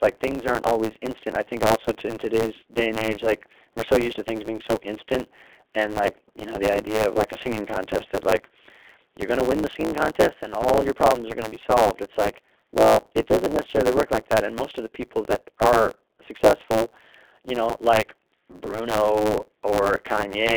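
G.729 coding runs throughout this speech clip: the talker is rebuilt from a vocal tract filter, pitch predictor and sparse pulses, giving a plainly rough, synthetic texture that fits an 8 kbit/s codec, with the line confined to roughly 300 Hz to 3.6 kHz and nothing above 4 kHz. A block size mismatch (truncated) also persists across the whole clip: each block is cut short before the next stage reads it, producing a 109 Hz buzz and speech running about 1.09 times fast at near-normal pitch.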